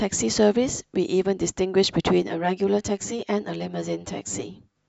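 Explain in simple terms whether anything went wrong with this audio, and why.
Channel delay (comb filtering) from 2.22 to 4.76 s: one channel runs about 10 ms late, so mixing both cancels evenly spaced tones and the speech sounds hollow.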